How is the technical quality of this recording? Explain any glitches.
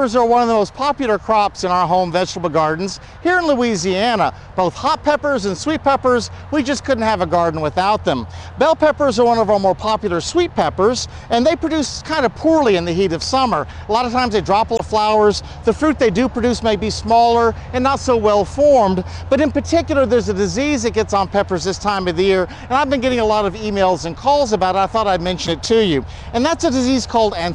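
The recording has two brief glitches, both damaged data in a compressed stream, at 14.75–14.80 s and 25.45–25.49 s. Corrupted bytes make the decoder misread those frames and lose sync until it finds a valid header, producing a short chirp or blip. A spectrogram shows a thin vertical smear of broadband energy, and the waveform shows an abrupt discontinuity.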